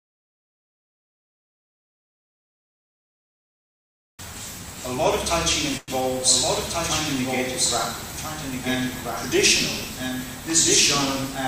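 The recording carries a doubled audio track from start to finish: a second full-band copy of the same audio runs about one and a half seconds behind the first and roughly 5 dB quieter, with no decay tail or room colouring. On a spectrogram, every pattern reappears as a fainter duplicate shifted right by that fixed interval, and the waveform shows the same envelope shapes repeating at reduced height. This is likely a second capture through a slower path, or an edit that left two unaligned copies. There is also a call audio freeze from 5.77 to 5.91 s. The last sound is stretched into a fading continuation for about 0.1 s before normal audio resumes exactly where it stopped, so nothing is lost and everything afterwards plays about 0.1 s later. A spectrogram shows a short smeared, flat-textured band there, and the waveform has a brief decaying stretch with no new onsets. The likely cause is late packets draining the jitter buffer.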